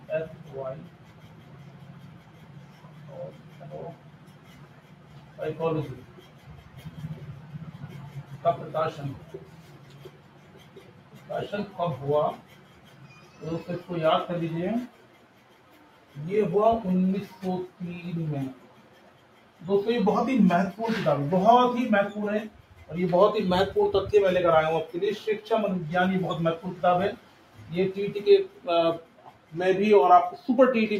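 Throughout, the level pumps and thins by roughly 10 dB as held material sinks; this is a noise suppressor applied to music or sounds, which treats steady tone as noise. Sustained passages dip by up to about 6 dB from 0.0 to 11.29 s, 12.41 to 13.41 s, 14.9 to 16.15 s, 17.71 to 19.61 s, 22.56 to 22.74 s, 27.17 to 27.58 s and 28.53 to 29.52 s. This is sound cut by the noise suppressor, which mistook it for background.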